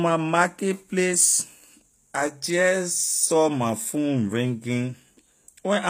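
Throughout the speech, s sounds come out gritty and lispy, with nothing above 15.5 kHz. This is likely HE-AAC compression, which rebuilds the treble from copied lower bands, fitting a low bitrate near 24 kbps. A spectrogram shows a hard ceiling and blocky, repeated upper-band patterns.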